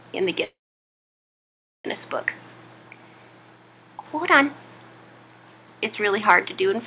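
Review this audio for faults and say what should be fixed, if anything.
At 0.44 s the sound trails off into a brief fading tail, then silence until 1.86 s. It resumes exactly where it stopped, with nothing lost but everything now 1.4 s late. This is a call audio freeze, likely caused by packets stalling in transit until the jitter buffer ran dry.

To prevent it, fix the network stall and give the jitter buffer enough headroom to ride out delivery pauses.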